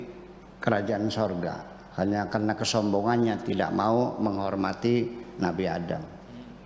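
No technical faults can be heard anywhere in this audio.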